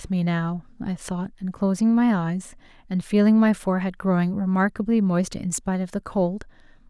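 No audible technical faults occur anywhere in the recording.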